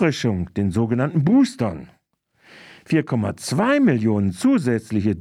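No technical faults are audible.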